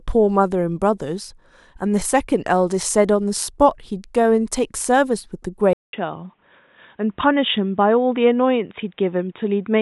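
At 5.73 s the speech cuts out for about 200 ms, then returns dull and boxy with nothing above 3.8 kHz until the end of the clip, at the same loudness and over a faint new background noise well below the speech. This is most likely an input switched to a poorer device. The gap, the sudden change of tone and the new noise floor set it apart from a gradual codec bandwidth drop or a simple low-pass filter on the same microphone.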